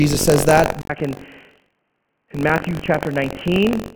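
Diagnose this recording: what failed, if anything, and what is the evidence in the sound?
Buffer tearing in the driver buffer: a robotic 46.9 Hz buzz rides the speech throughout, which fits a 1024-sample buffer where roughly a tenth of each period is stale.

At 0.82 s, after "says that", there's an 80 ms gap, then a narrower, duller band and about 5 dB less level. That's likely the input switched to a poorer device.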